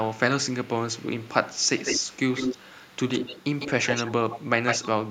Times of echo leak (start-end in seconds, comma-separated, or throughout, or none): 0.09-0.18, 0.48-0.70, 0.97-4.88